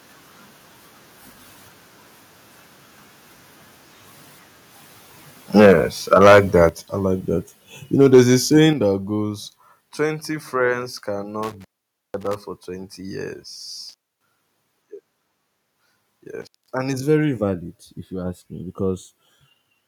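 From 5.56 to 5.73 s, 6.12 to 6.64 s and 8.01 to 8.2 s, peaks turn harsh and crackly, up to about 10 dB over. Microphone overload is the likely cause, with tops clipped at the converter. Level then drops suddenly, about 3 dB at 5.66 s, 8 dB at 6.69 s before "I like that", and 7 dB at 8.73 s. This is likely the microphone volume stepped down by software. Intermittent contact cuts the sound at 11.43 to 12.36 s, 13.89 to 14.26 s, and 16.42 to 16.73 s before "and it's very valid". Each gap lasts 0.21 to 0.5 s, with crackle at the edges.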